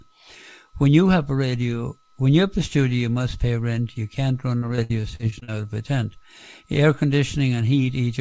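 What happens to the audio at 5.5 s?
At 5.51 s, a burst of repeated packet loss (robotic sound) ends. It began at 4.58 s. Short gaps, up to 57 ms, are patched by stretching the previous sound. The result is choppy and robotic.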